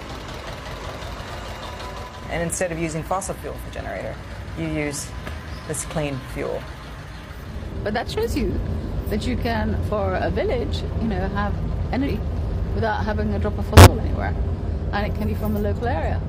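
The decoder dropped whole compressed frames five times, either missing from the file or rejected as damaged, so playback jumps forward past the lost audio. These compressed frames skipped land at 1.1 to 1.3 s, 3.63 to 3.67 s, 12.03 to 12.09 s, 13.75 to 13.89 s and 15.24 to 15.29 s. Each cuts out around a twentieth to a fifth of a second, and each join is heard as a sudden jump in the sound.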